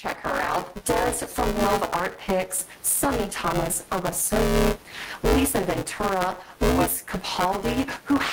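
From the first moment to the end of the speech, the level keeps pumping. The background rises in each pause and then drops as each loud syllable arrives, by something like 15 dB. This is gain pumping, likely from input gain set far too high and a fast limiter clamping it back. The room noise, about 39 dB below the speech, swells in the gaps. On a waveform, the peaks look flattened to a similar height and the gaps are raised. A spectrogram shows the noise floor brightening between phrases and dimming under them.

Also running the whole way through is buffer tearing. Whenever the speech is present there is a rattling, robotic buzz at 188 Hz, and it disappears in the silences. That rate fits a 256-sample buffer. The writing and reading positions in the buffer have drifted until they overlap. Roughly a third of each period therefore replays audio from about 10 ms earlier, with a hard splice at each end. 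On a spectrogram this shows as evenly spaced vertical stripes at 188 Hz across the speech. On a zoomed waveform, the repeated segments appear as abrupt breaks in the cycle.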